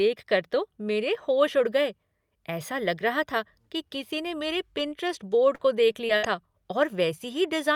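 Speech, with repeated packet loss (robotic sound) from 4.77 to 6.25 s. Several short holes appear in quick succession. The longest is 59 ms, and together they remove 160 ms of audio. Each hole is filled by extending the sound just before it. Roughly 0.3 s ends up choppy.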